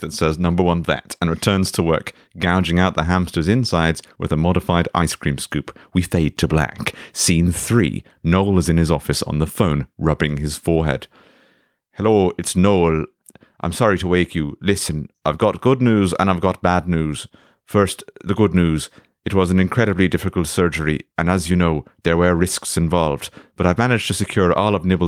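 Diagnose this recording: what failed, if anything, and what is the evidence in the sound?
Clock drift between sender and receiver is the root problem here, and it sits at the network jitter buffer. The far end's audio clock seems to be running fast, by something like 4 percent, so samples arrive quicker than the receiver plays them out. The buffer keeps creeping toward full, and the receiver has to throw audio away to keep latency in check. You can hear that tug-of-war across the whole speech clip.

The repeated timing corrections are the audible side of that, running from about 0.40 s right through to 25.02 s. Because the sender is fast, every edit goes the same way: the receiver trims short slivers out of the stream, and the net effect is playback at roughly 104 percent speed. The cuts land at uneven intervals, so rather than a clean speed-up you get slight hiccups and a tempo that feels faintly rushed and unsteady.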